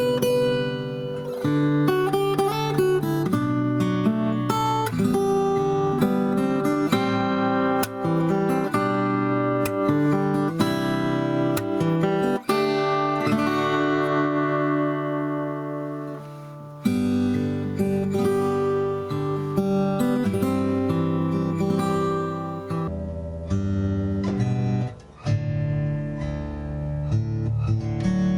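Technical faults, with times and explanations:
22.88–28.38 s: section at the wrong speed. From here to the end the sound plays at half speed, so everything is stretched out and pitched down by about ten semitones. Tempo and pitch drop together, likely from playback against a mismatched clock.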